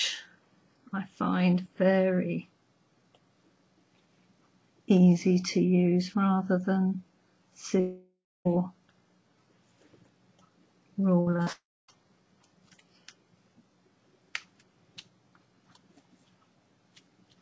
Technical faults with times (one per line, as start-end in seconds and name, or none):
7.80-8.47 long network dropout
11.21-11.48 repeated packet loss (robotic sound)
11.52-11.90 long network dropout